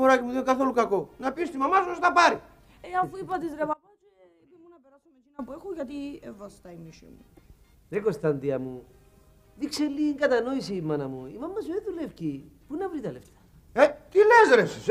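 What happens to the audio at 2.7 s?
Nothing goes wrong at 2.7 s; the audio plays through that moment intact, with no dropout, click or other fault.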